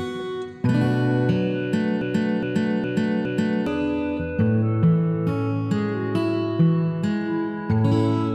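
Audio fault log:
2.01–3.67 s broken-record loop: a 0.41 s fragment repeats four times, likely a stalled player, encoder or stream resending it, replacing the audio due there.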